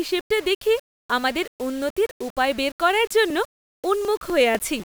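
From the start to the end, the speech carries a coarse, grainy distortion that moves with the sound. Quiet parts turn gritty and rough. The likely cause is low bit depth without dither. The error sits only around 25 dB below the signal, which fits six-bit rounding.

Just after "উন্নতির উপায় বের করার", from 3.30 s to 4.80 s, periodic USB or driver dropouts appear. About seven small ticks land every 0.25 s. Each one skips roughly a millisecond of audio. The bus or driver stalls briefly, and the jump clicks.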